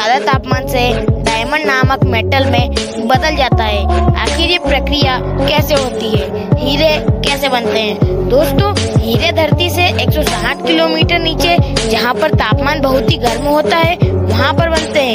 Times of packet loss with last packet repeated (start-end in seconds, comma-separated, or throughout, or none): none